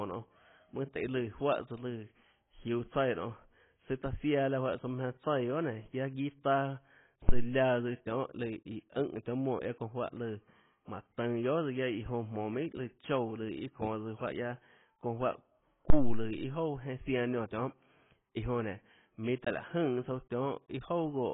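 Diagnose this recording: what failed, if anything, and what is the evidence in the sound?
Dull, heavily smeared speech with nothing above 3.8 kHz throughout: likely AAC compression at the codec stage, with AAC-LC at a low bitrate, around 16 kbps, lowering its cut-off.

Deep thumps at 7.29 to 7.52 s, just after "guiaâ guiâ taâ", and 15.90 to 16.40 s, decaying over 51 and 112 ms: a phantom power thump, a supply switching step passing through the analogue input's coupling capacitors.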